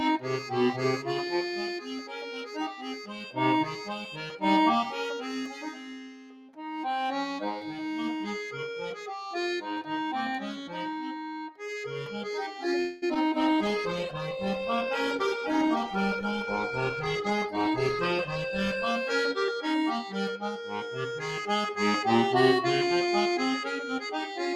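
Held sounds and decaying tails in this non-speech audio keep sinking and swelling while sharp onsets stay near full level, so the whole clip pumps and thins by about 5 dB. That is a noise suppressor applied to music or sounds: a processor tuned for speech treats anything steady or reverberant as background noise and pulls it down, but lets transients through. In places it goes further, and the sound is cut by the noise suppressor: dips of about 9 dB at 0.19–0.52 s and 1.79–3.38 s, about 6 dB at 3.65–3.90 s, about 9 dB at 4.11–4.43 s, about 11 dB at 5.16–6.81 s, about 7 dB at 7.59–7.85 s, about 6 dB at 10.55–10.75 s and about 10 dB at 11.06–11.61 s. The longer stretches have sustained sound sagging and decays cut short, and the brief ones are quick dropouts in held material. From 12.79 to 13.04 s the sound stops moving forward and carries on as a fading, buzzy continuation of what came before, for about 0.23 s. 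Then it picks up exactly where it left off, with nothing lost, just pushed later. This is a call audio freeze, likely caused by packets arriving late enough that the jitter buffer ran dry and the receiver had to improvise until they turned up. Right after, at 13.14–13.17 s, there is a brief smear or wobble. That is short concealed packet loss: about 20 ms of audio never arrived, and the receiver papered over it by extending the preceding sound before blending back into the real signal. From 13.41 s to 19.00 s the tone turns rough and watery and loses its top end, then clears again. That is a call bitrate drop from 96 kbps to 15 kbps: the sender's bandwidth estimate fell, so the encoder had far fewer bits to work with, coded the sound more coarsely and discarded the high frequencies to cope. Inside that degraded stretch the audio also rushes slightly, at 15.26–15.98 s and again at 16.47–18.19 s. 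It runs about 5 percent fast without any change in pitch, and any steady rhythm loses its evenness. This is a jitter buffer speed-up: with more audio queued than it wanted, the receiver trimmed out tiny pitch-period-sized slices over and over to catch up. It removed about a twentieth of a second in the first stretch and about a tenth in the second.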